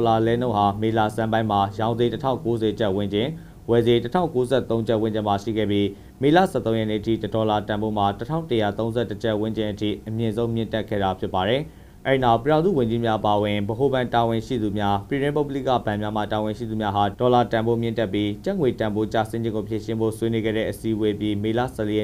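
Nothing in this audio stands out as a technical problem; it's an easy, uneventful listen all the way along.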